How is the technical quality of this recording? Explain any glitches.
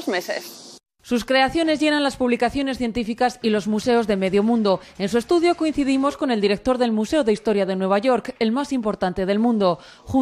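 The recording's technical quality holds up, with no glitches to explain.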